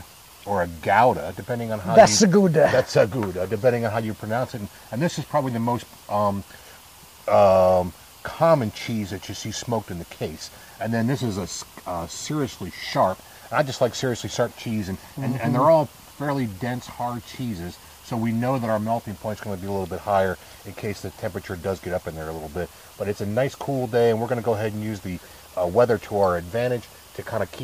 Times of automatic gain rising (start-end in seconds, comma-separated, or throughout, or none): none